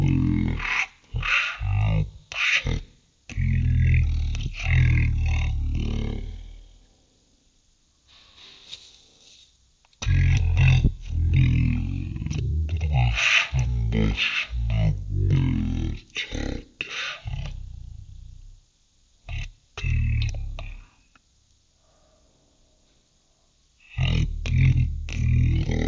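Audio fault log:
Throughout, wrong sample rate: the speech crawls at one third of its proper speed and sits about 19 semitones low, deep and dragging. Speed and pitch fall together with no conversion, which fits 48 kHz material played back at 16 kHz.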